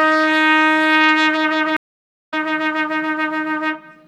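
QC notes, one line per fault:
1.77–2.34 s, stream reconnect: the audio drops out for about 0.56 s as the connection restarts, then picks up roughly half a second further on.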